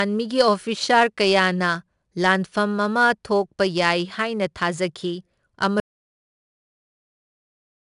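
From the first moment, the speech has been through 4-bit ADPCM compression. Each sample is coded as a coarse 4-bit step away from a running prediction, and the error this leaves rides on the signal as broadband noise that rises and falls with it. Here the damage is plainly audible: a gritty hiss clings to every louder syllable, and sharp onsets come out roughened where the step size lags behind. Nothing is left above 10.6 kHz, which fits a low sample rate at roughly 89 kbps and takes some air off the top.

At 5.8 s the input was most likely lost, through a dropped connection or a mute, while the recording carried on writing silence. This audio dropout to silence cuts the speech off mid-flow and runs to the very end. The gap is dead silence with no room tone, and whatever followed is gone.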